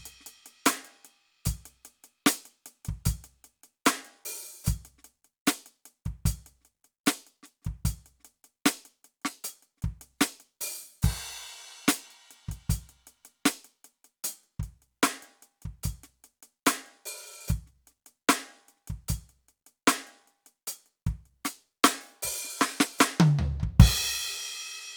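No technical faults turn up anywhere in this music recording, and the signal holds steady without any breaks or disturbances.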